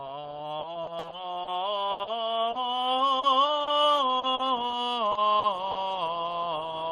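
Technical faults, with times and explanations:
0.59 to 2.58 s and 3.19 to 4.42 s: repeated packet loss (robotic sound). Packets kept going missing, eight gaps in the first stretch and four in the second, totalling about 360 ms and 160 ms. Each hole was bridged by extending the previous sound. The music turns choppy and mechanical, with the longest gap 80 ms.
5.11 to 5.18 s, 5.39 to 5.46 s and 5.71 to 5.78 s: short concealed packet loss. Three isolated 40 ms holes arrived too late for the decoder. The receiver patched each by continuing the preceding sound, then crossfaded back. Each one is heard as a brief smear or wobble in the music.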